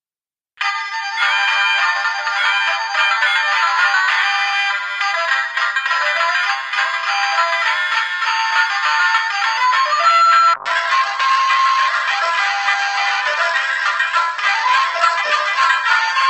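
At 10.55 s a call bitrate drop sets in. The encoder falls from 64 to 9 kbps, and high frequencies cut off at 8 kHz. Sounds turn coarse and dull, with no recovery before the end.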